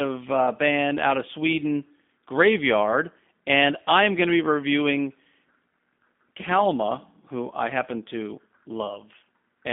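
Speech heard through a G.729 codec for its whole length. Nothing passes above 3.5 kHz, and the low end stops near 200 Hz. The voice is rebuilt from a filter model and a few pulses, so it sounds plainly rough and synthetic, which fits an 8 kbit/s stream.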